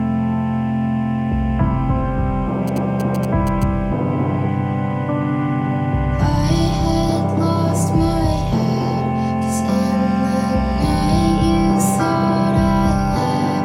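From 2.68 to 3.64 s, a galloping dit-dit-dit of short buzzes at about 217 Hz sits roughly 15 dB below the audio. These are GSM signalling bursts: a nearby 2G phone's short radio bursts are rectified by the audio circuit and heard at their repeat rate. From 4.32 to 7.34 s the sound turns coarse and rough, worst for about 1.5 s, then clears. This is a call bitrate drop: the call's bandwidth estimate fell and the encoder went from 96 to 28 kbps, coding with far fewer bits until the rate recovered.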